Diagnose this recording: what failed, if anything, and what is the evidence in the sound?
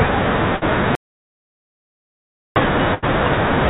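Burst of packet loss, network stage: at 0.56 to 0.71 s and 2.94 to 3.04 s the sound stretches into a fading held sound, about 54 ms and 80 ms of concealment fill, then resumes with roughly 60 ms and 80 ms missing. Unlike a dropout, the gap is filled rather than silent.

Audio dropout to silence, capture stage: from 0.95 to 2.56 s, about 1.6 s, the speech cuts off abruptly into silence with no room tone, then returns mid-flow. This is likely a lost input device or stray mute, not network loss, because nothing was concealed. The band-limited sound, with nothing above 4 kHz, fits a G.711 A-law call path.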